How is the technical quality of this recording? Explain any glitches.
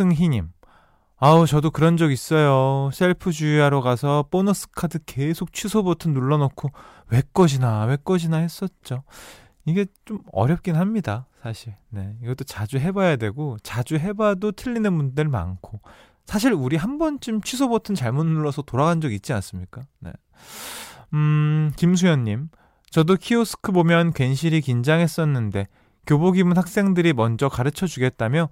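No glitches turn up anywhere in this speech recording, so there's nothing technical here to explain.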